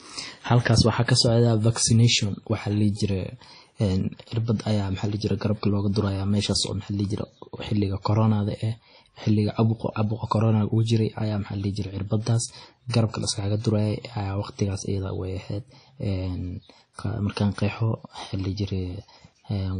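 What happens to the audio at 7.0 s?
At 7.0 s, as across the whole clip, the speech carries WMA-style compression damage, likely from a low-bitrate encode near 32 kbps. Long transform blocks smear quantisation noise into a ringing, washy hiss that breathes with the signal, and nothing survives above 10.1 kHz, unlike a plain low-pass.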